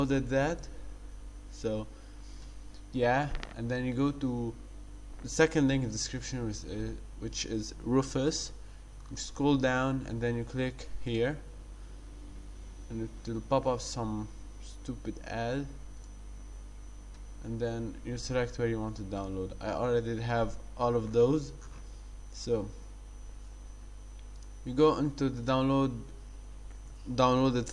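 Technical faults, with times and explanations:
No technical faults can be heard anywhere in this audio.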